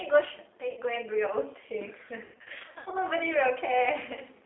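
The G.729 codec runs throughout at 8 kbit/s, rebuilding speech from a filter and sparse pulses, so the speech is confined to 250 Hz to 3.6 kHz and sounds plainly rough and synthetic. Lost VoIP packets are concealed by the speech codec: at 0.71 to 0.80 s the decoder extrapolates over 60 ms, leaving a brief buzzy or noisy smear. From 2.24 to 2.94 s, scattered losses totalling 420 ms, in runs of up to 100 ms, repeatedly turn the speech into a fading buzzy or noisy stretch, weakened as each frame builds on the last.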